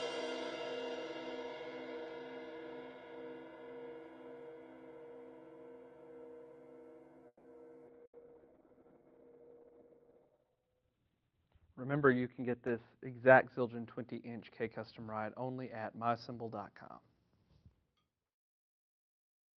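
Around 7.27 s the sound stalls in what's likely a call audio freeze: packets got held up, the jitter buffer ran empty, and the receiver stretched the last bit of sound into a fading buzz or hiss before about 50 ms of silence. Roughly 170 ms gets filled in all, and when audio resumes at 7.47 s it picks up right where it left off. Nothing's lost, but playback now runs about 170 ms further behind.

Then at 7.86 s there's a skip ahead. Around a tenth of a second of audio just isn't there, with only about 10 ms of fill bridging the join, so playback lurches forward almost seamlessly. That pulls the delay back by roughly 100 ms.

Almost at the same moment, 7.87 s, the call bitrate drop kicks in. The encoder gets squeezed from 32 kbps to 7 kbps, and the audio bandwidth shrinks from about 12 kHz to 4 kHz. You hear it go muffled and rough, with coarser, watery coding. It sits at that floor for about 3.2 s, and the bitrate hasn't climbed back to 32 kbps by the end of the clip, so the dulled, degraded quality carries on to the finish.

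At 8.05 s a burst of packet loss hits. The receiver papers over about 80 ms by extending the last sound and fading it, as a held buzz or dying hiss. When things pick up at 8.16 s, about 60 ms of real audio is simply gone, and the delay creeps up another 20 ms.

Right after, from 8.18 to 9.00 s, there's a jitter buffer slow-down. The buffer's rebuilding its reserve by repeating single pitch periods or slivers of pauses over and over, which adds about 99 ms. The result plays at roughly 89% speed with pitch unchanged. Sounds come out drawn-out and a bit stretched, and there may be a warble from the repeated pieces.

Last, from 12.38 to 13.66 s, the jitter buffer speed-up goes the other way. The buffer's holding more than it wants, so it trims short chunks of one or a few pitch periods, about 200 ms in total. Playback runs at around 113% with the pitch intact, which comes across as noticeably hurried. 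This all rides on the normal Opus call path at 32 kbps, whose coding noise and 12 kHz top end are there before the drop.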